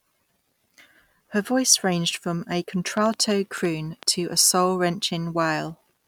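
From 2.97 to 4.04 s a train of clicks sits over the speech: about seven sharp ticks at roughly 5.7 per second, spaced unevenly, each poking out around 5 dB above the speech level. The likely cause is interference or a faulty connection or power supply injecting repeated pulses. On the waveform they show as thin isolated spikes of similar shape; on a spectrogram, as narrow vertical lines running across all frequencies.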